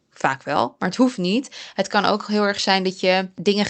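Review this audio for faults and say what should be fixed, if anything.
Nothing in this speech clip needs fixing, as it shows no faults.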